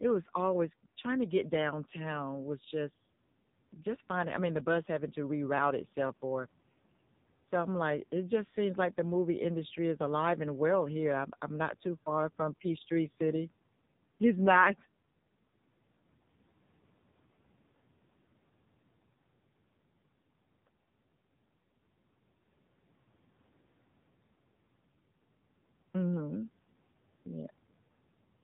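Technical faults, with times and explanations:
Throughout: AMR narrowband mobile codec. The speech is band-limited to telephone width, with nothing audible above 4 kHz, and every syllable carries a buzzy, synthetic edge. The coder rebuilds the voice from a vocal-tract filter excited by only a few pulses per short subframe. Heavy damage like this fits one of the lowest AMR-NB modes, around 5.9 kbps, where that sparse excitation leaves the speech sounding thin, rasping and artificial.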